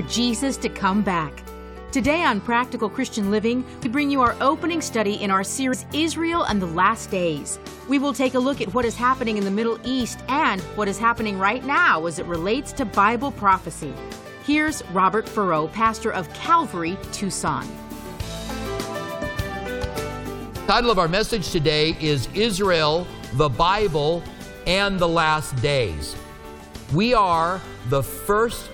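At 3.84, 5.72 and 20.68 s, compressed frames skipped: the audio jumps ahead by about 100, 150 and 300 ms, consistent with whole 23.2 ms frames dropped. Each join is a brief smeared blip. The spectrogram shows an abrupt content change without a sharp vertical click line.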